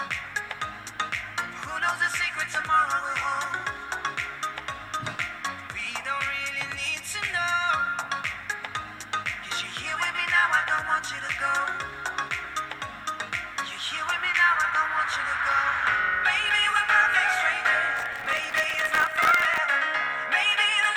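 Processor overload crackle runs from 17.97 s to 19.58 s. Over that stretch the processing falls behind and misses around a hundred buffer deadlines, each buffer lasting well under a millisecond. Every miss is filled by repeating a scrap of audio that has already played, with abrupt edges on both sides. Strung together, these tiny repeats form a gritty, tearing crackle over the sound that stops once the load clears.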